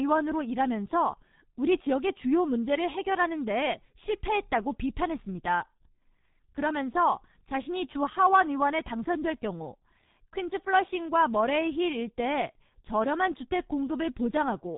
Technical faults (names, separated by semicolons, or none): G.723.1 codec